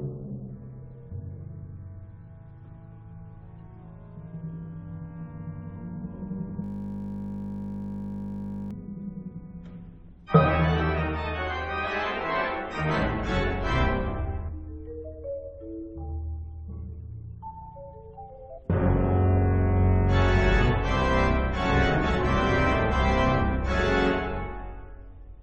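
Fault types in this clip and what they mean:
System hang loop: The machine or driver froze while the sound hardware kept replaying the same ring buffer, so one 20 ms slice repeats about 103 times from 6.64 to 8.71 s. Because the piece is so short, it is heard as a steady 50 Hz buzz rather than a stutter. A waveform shows identical 20 ms cycles tiled end to end, and a spectrogram shows evenly spaced horizontal harmonic lines at 50 Hz intervals, frozen in place.
Damaged data in a compressed stream: Corrupted bytes in the encoded file make the decoder misread or reject frames and lose sync until it finds the next valid frame header. The result is a brief chirp or blip at 11.85 s, from 18.57 to 18.59 s, and at 22.91 s, each lasting only tens of milliseconds. On a waveform each appears as an abrupt discontinuity or odd burst, and on a spectrogram as a narrow vertical smear of energy across many frequencies.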